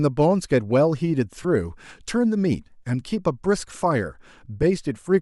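At 1.43 s, the speech breaks briefly for about 15 ms, which fits two lost LE Audio frames. The decoder fills the gap by repeating the last spectrum with scrambled phase. It sounds like a short noisy smear. At 4.62 s, a single 7.5 ms frame drops the same way.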